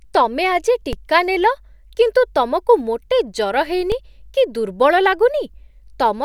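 A DC step occurs at 0.93 s, between "ତମେ ଆଜି" and "ନେଲ କିନ୍ତୁ ତମକୁ", and again at 3.92 s. Each time the waveform's zero line suddenly shifts by about -12 dBFS. A high-pass around 20 Hz then pulls the offset back toward zero. The abrupt jump is heard as a brief low thump, and the speech continues unchanged in level and tone on either side of it.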